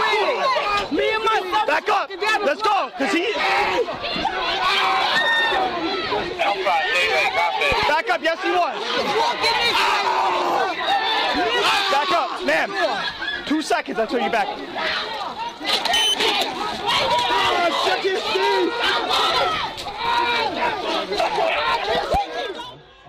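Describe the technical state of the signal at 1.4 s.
At 1.4 s the signal is intact, with no audible fault at that moment.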